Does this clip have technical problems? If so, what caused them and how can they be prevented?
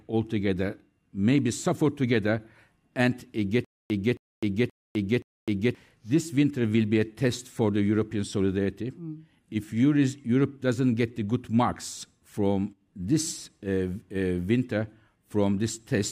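Yes. A stutter with silent gaps runs from 3.64 to 5.75 s: a 271 ms fragment repeats four times, every 526 ms, with 255 ms of digital silence between. A waveform shows identical blocks split by flat lines, and a spectrogram shows repeated patches and blank columns. The likely cause is a stalled stream replaying its last fragment at each retry, losing the speech meant for that span. Deeper buffering and steadier delivery prevent it.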